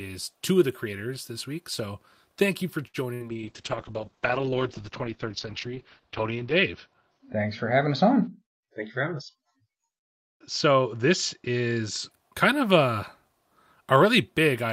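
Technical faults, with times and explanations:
2.87 to 2.97 s, short stall from a late packet: sound held about 64 ms while the buffer waited, then resumed in place, nothing lost, unlike a loss burst.
3.14 to 3.35 s, burst of packet loss: about 80 ms went missing, concealed by about 65 ms of continued, fading sound before the speech skips ahead past the lost part.
3.32 to 12.17 s, call bitrate drop: encoding fell from 48 to 8 kbps, bandwidth from 20 kHz to 6 kHz, so speech turns muffled and rough.
8.54 to 9.42 s, jitter buffer speed-up: speech runs about 6% faster at unchanged pitch as roughly 50 ms of pitch periods are trimmed to cut delay.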